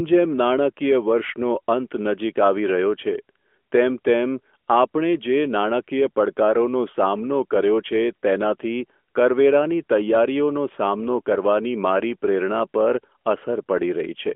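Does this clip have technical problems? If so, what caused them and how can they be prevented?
No, there's nothing here that needs fixing, just speech carried over an AMR narrowband mobile codec link at 12.2 kbps, which gives it that familiar phone-call band of roughly 250 Hz to 3.4 kHz.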